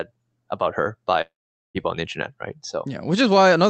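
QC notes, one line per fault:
1.21 to 1.78 s, long network dropout: after "about her" the sound smears into a fading buzz, then goes silent for about 0.45 s. It resumes at "on the internet right" with about 0.54 s lost, likely because the receiver stretched the last audio over missing packets.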